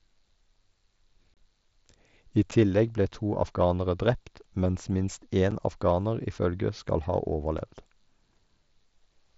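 Speech over an mSBC headset link, band-limited to 8 kHz, has unconcealed Bluetooth headset packet loss: a 30 ms hole at 1.34–1.37 s and 7.5 ms dropouts at 2.51, 4.36, 5.51 and 7.58 s. They show as flat-line gaps in the waveform and blank vertical stripes on the spectrogram.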